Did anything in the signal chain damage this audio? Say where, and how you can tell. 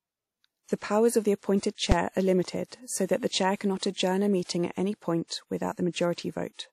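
Yes. At the codec stage, the speech has plainly audible codec damage: a ringing, washy quality and a hiss that rises and falls with the signal. It is likely lossy WMA compression at a bitrate around 48 kbps. A spectrogram shows smeared, blurred detail around syllables.

At 1.92 s, a processing calculation produced invalid numbers that were forced to one extreme value, heard as a single loud bang. On the waveform, a brief flat slab sits far beyond the speech peaks. Its length, about 5.8 ms, fits a 256-sample block. The spectrogram shows a bright broadband vertical line.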